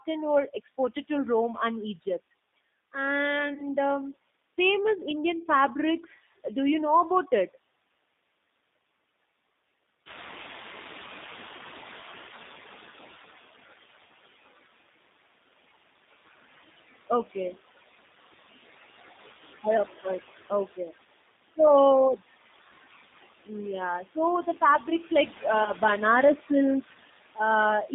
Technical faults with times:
0.00-27.94 noise suppressor artifacts
0.00-27.94 G.729 codec
3.54-3.65 VoIP packet loss concealed by the speech codec
10.05-13.29 noise suppressor catching up
11.57-11.61 VoIP packet loss concealed by the speech codec
24.04-25.44 speech cut by the noise suppressor
25.64-25.72 VoIP packet loss concealed by the speech codec
26.35-26.50 speech cut by the noise suppressor
26.91-27.39 speech cut by the noise suppressor

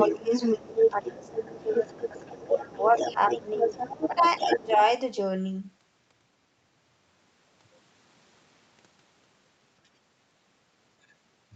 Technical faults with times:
0.00-4.92 other side's voice leaking through
0.08-0.30 speech suppressed in double talk
0.57-1.86 speech suppressed in double talk
2.48-3.18 speech suppressed in double talk
3.53-3.66 speech suppressed in double talk
4.08-4.80 speech suppressed in double talk

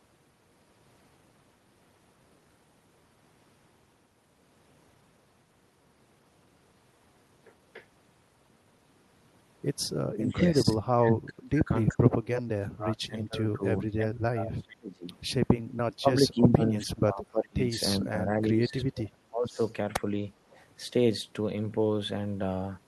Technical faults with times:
10.14-15.08 speech suppressed in double talk
15.99-17.71 speech suppressed in double talk
17.99-19.59 speech suppressed in double talk
19.91-20.03 speech suppressed in double talk
20.50-20.64 echo leak

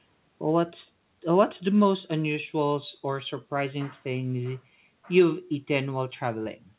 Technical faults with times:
none

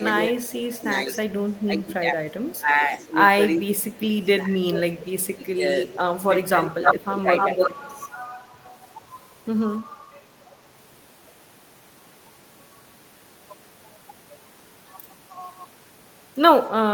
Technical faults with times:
0.00-0.68 speech suppressed in double talk
0.12-1.92 echo leak
1.66-5.63 speech suppressed in double talk
2.45-4.21 echo leak
5.25-6.23 echo leak
6.28-7.76 speech suppressed in double talk
6.82-9.03 echo leak

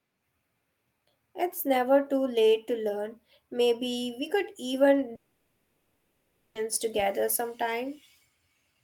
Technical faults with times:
5.15-6.57 long network dropout

